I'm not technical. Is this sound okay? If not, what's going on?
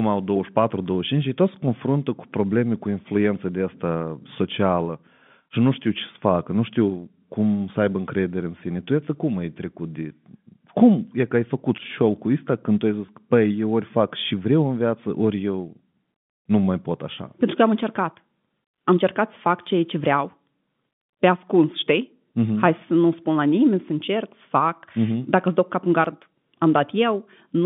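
No. There is packet loss with pitch repetition at 13.06 to 13.08 s: about 20 ms of the speech went missing in transit, and the receiving end filled the gap by briefly repeating the last bit of voice, so it sounds like a tiny held, buzzy blip over the telephone-quality line.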